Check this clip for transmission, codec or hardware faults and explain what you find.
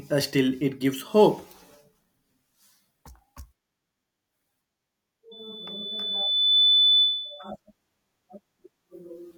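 One fault is present: loudspeaker feedback squeal from 5.31 to 7.52 s. A microphone is picking up the loudspeaker it feeds, and at 3.5 kHz the loop gain exceeds one. That tone swells over roughly one and a half seconds into a steady squeal, peaking around 10 dB above the speech.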